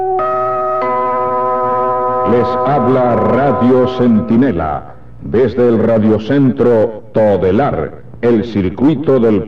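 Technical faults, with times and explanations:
No technical faults can be heard anywhere in it.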